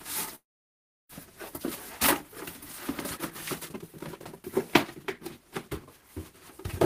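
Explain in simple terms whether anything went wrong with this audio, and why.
Two problems are audible. From 0.35 to 1.11 s there is a long network dropout, likely caused by audio failing to arrive in time. The last sound is stretched into a fading buzz, then silence, and when sound returns, about 0.4 s of it is simply gone.

Afterward the player plays catch-up with a jitter buffer speed-up, trimming tiny slices of sound to cut the built-up delay. From 3.17 to 4.40 s it runs about 21% fast, dropping roughly a third of a second. From 4.96 to 6.09 s it runs about 5% fast, with the pitch unchanged throughout.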